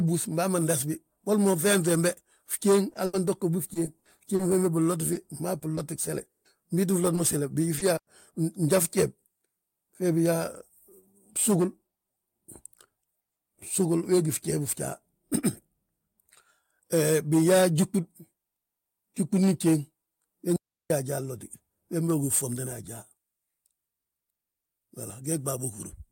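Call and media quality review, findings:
Repeated packet loss (robotic sound), 2.89–4.41 s and 5.13–6.47 s. Choppy speech with pieces missing. Jitter buffer/PLC on the network path: eight gaps (280 ms patched, ~18% of span, longest 80 ms), then four (200 ms, longest 140 ms), each bridged by repeating the last sound.

Short concealed packet loss, 7.15–7.19 s, 7.75–7.79 s and 7.79–7.83 s, the latter two right after "mo gsele". Brief smears/wobbles. Decoder concealment filled about 20 ms of missing audio each time by extending the previous sound, then crossfading back.

Digital wireless dropout, 7.97–8.07 s (again just after "mo gsele") and 20.56–20.90 s. Clean near-silent holes of roughly 100 ms and 340 ms, no noise burst. Digital wireless link lost too much data and the receiver muted with a quick fade.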